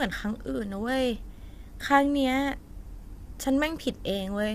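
A speech clip carrying plainly audible low-delay AAC compression from start to finish, likely AAC-ELD at a rate around 32 kbps. The low bitrate fills the gaps between the pitch harmonics with noise, giving a rough, grainy texture, unlike the pre-echo smearing of longer-frame codecs.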